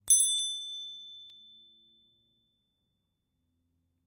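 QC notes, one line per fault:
1.30 s, repeated buffer: new audio arrived late, so the device played its last 2.67 ms buffer once more, which fits a 256-sample buffer. The same tiny piece sounds twice with a hard join, heard as a click or brief buzz, and roughly 3 ms of audio is lost.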